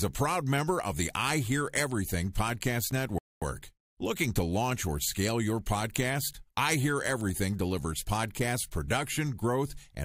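At 2.91 s, one block of samples was written out as zeros, a block of digital silence about 5.3 ms long, which fits a 256-sample block. The speech drops to true silence and returns with no fade, so the hole is too short to hear as a gap and comes across as a single sharp tick.

From 3.18 s to 3.42 s, the player used up its downloaded audio and waited for more to arrive, a rebuffering stall. The speech cuts to silence for about 234 ms, then picks up exactly where it stopped, with nothing missing but extra time inserted.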